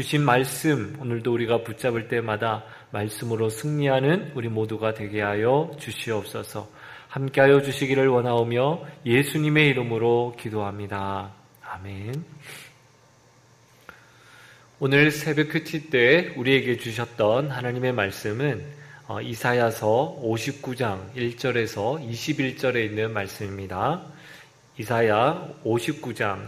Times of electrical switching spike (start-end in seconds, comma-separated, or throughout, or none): 8.38, 12.14